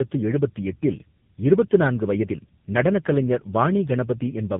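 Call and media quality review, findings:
Tandem speech coding throughout the clip: two speech codecs in a row, probably GSM full rate then AMR-NB, each re-encoding prior loss. Rough, muffled, warbly, nothing above 3.8 kHz.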